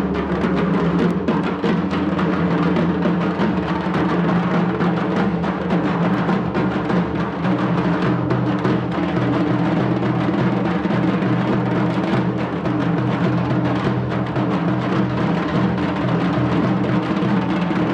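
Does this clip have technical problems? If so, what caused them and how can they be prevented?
Yes: two bit error spikes, sharp broadband ticks at 1.11 s (about -20 dBFS) and 6.14 s (quieter, about -32 dBFS). Each is a flipped bit across three samples, jumping by a power of two and snapping back. Use error-checked links and ECC memory to prevent it.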